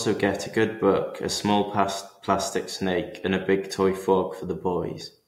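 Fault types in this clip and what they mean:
No technical faults are audible in this speech.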